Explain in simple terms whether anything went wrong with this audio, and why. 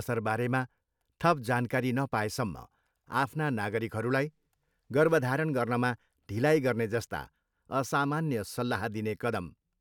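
Nothing went wrong here: the speech comes through steady and intact, with no technical problems to be heard anywhere in the recording.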